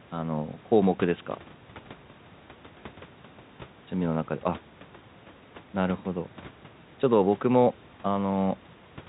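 No technical faults can be heard in this speech. A room noise sits about 27 dB below the speech, and the narrow telephone band of G.711 coding keeps everything under 4 kHz.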